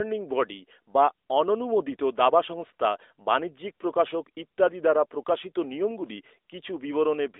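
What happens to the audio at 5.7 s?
At 5.7 s the speech carries the AMR narrowband mobile codec that runs through the whole clip. The vocal-tract model rebuilds the voice from a few pulses per frame, giving a buzzy, synthetic phone sound that fits a mid-rate mode around 10.2 kbps. A spectrogram shows energy confined to roughly 300 Hz to 3.6 kHz, with nothing above 3.8 kHz.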